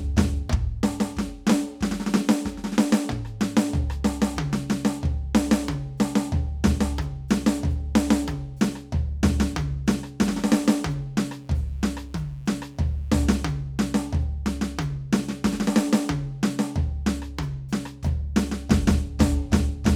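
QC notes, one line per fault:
11.26–13.43 s: mains buzz, a steady raspy 60 Hz buzz well below the music, rich in sharp harmonics unlike a smooth hum.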